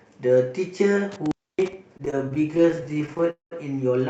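At 1.12 s an intermittent contact sets in and lasts until 1.73 s. A loose plug or cable connection breaks for a moment. The sound drops out for about 273 ms. Crackle marks the edges of the break, and faint hiss fills the open line.

From 1.97 to 3.23 s the speech falls into repeated stalls, a stutter. Packets kept arriving too late, so the jitter buffer emptied over and over. Each gap lasts at most 22 ms. The receiver stretched the last sound to cover them, adding about 295 ms in total. Nothing is lost, but the speech drags and hiccups.

A call audio freeze follows, from 3.31 to 3.53 s. The sound hangs on and fades, then goes silent for about 130 ms before resuming where it stopped. About 207 ms is filled in and nothing is missing. The likely cause is packets held up in transit, which drained the jitter buffer. Throughout, the call codec cuts off the sound above 8 kHz.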